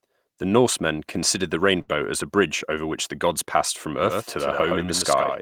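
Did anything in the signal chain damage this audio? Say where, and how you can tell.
Yes. Between 1.81 and 1.91 s, right after "considered the" and before "as a bridge over", a sound hangs unnaturally long with a slight buzz or dip. This is a short stall from a late packet in the network path: the jitter buffer emptied, the receiver stretched about 62 ms of audio, then resumed with nothing lost.

From 4.03 s, after "the gods passed from", to the end, a dry, full-band second copy trails the speech by roughly a tenth of a second, about 5 dB quieter, and starts abruptly with no room decay. This doubled audio track is likely a second, slower capture or routing path mixed back in.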